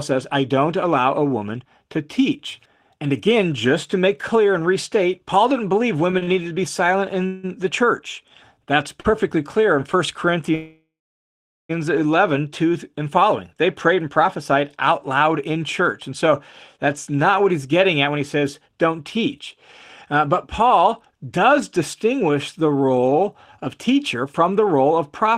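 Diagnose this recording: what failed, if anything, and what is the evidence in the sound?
The trouble is all on the network side, surfacing at the receiver's jitter buffer. From 6.11 to 7.49 s there are repeated stalls (stutter): four separate holds where the last bit of speech gets stretched, the longest about 170 ms, roughly a quarter of a second in total, so about 18% of that stretch is fill. Nothing's actually lost. Packets were arriving late or slower than playout, the buffer kept draining, and each time the receiver padded until it could pick up again.

Then at 9.00 to 9.06 s there's a short stall from a late packet, a single 38 ms hold where one sound just hangs on a touch too long with a faint buzz or dip. One packet missed its deadline, the buffer ran dry for that instant, and the receiver extended the last sound until the packet arrived. Playout then resumed exactly where it left off, so nothing's skipped, just delayed by those 38 ms.

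The big one is a call audio freeze from 10.55 to 11.71 s. The audio stops dead and gets filled for about 1.1 s. It starts as a held continuation of the last sound, then fades out, leaving around 800 ms of silence before the speech carries on from the same point. The likely cause is packets held up in transit long enough to empty the buffer completely, which puts a gap into the audio rather than dropping anything.

From 14.91 s right to 25.31 s you get a jitter buffer speed-up. Speech runs about 5% fast at unchanged pitch, so it sounds a bit rushed. The buffer was holding more audio than its target. The receiver trims it back by cutting out tiny pitch-period-sized slices over and over, about half a second in all across that stretch.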